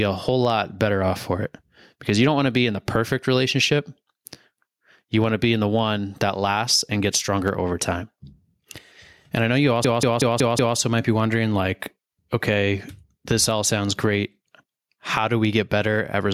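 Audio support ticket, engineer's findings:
Gain pumping, throughout. Gain swinging around 15 dB. Dynamics squashed. Likely cause: input gain set far too high, with a fast limiter or compressor clamping down on each peak.

System hang loop, 9.85 to 10.77 s. One 186 ms slice repeats exactly five times, a machine-gun stutter at about 5.4 Hz. Host or driver stalled while the interface kept replaying its ring buffer, which fits an 8192-sample buffer.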